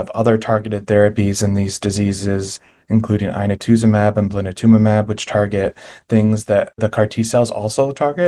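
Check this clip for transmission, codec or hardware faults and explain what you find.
No faults detected here.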